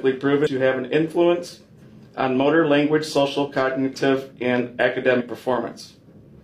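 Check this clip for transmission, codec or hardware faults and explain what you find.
Two dropouts of the compressed frames skipped kind, at 0.42 to 0.47 s and 5.16 to 5.22 s. Whole codec frames were never decoded, either missing or rejected as corrupt, so playback jumps forward, roughly 150 ms at the first point and 100 ms at the second. That fits about three and two frames of 46.4 ms.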